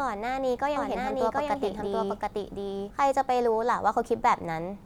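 From 0.76 s to 2.90 s, a doubled audio track appears: a full-band copy of the speech runs roughly 0.7 s behind, at about the same level, dry and without decay, switching in and out abruptly. Likely cause: a second, slower capture path mixed in.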